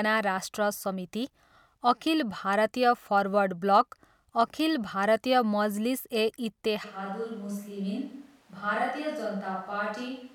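At 6.86 s the speech abruptly turns hollow and roomy, thinner in the bass, roughly 5 dB quieter and noisier through the end, likely a switch to a distant microphone.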